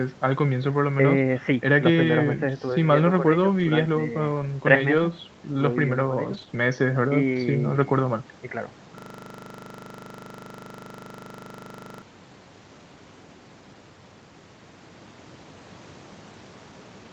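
Brief rough, noisier patches at 3.59 to 3.65 s, 4.97 s, 6.33 to 6.47 s, 6.53 s and 7.33 s are lost packets rebuilt from error correction. Each missing stretch, 20 to 80 ms long, was replaced by the decoder with the lower-quality backup copy carried in the following packet.

At 6.49 to 6.53 s, a quick smear comes from short concealed packet loss: 20 ms never arrived, so the receiver extended the preceding sound to cover it.

From 8.98 to 12.02 s, a steady 25 Hz buzz is a system hang loop. A single 40 ms piece repeats about 76 times while the frozen system left the sound hardware cycling through its buffer.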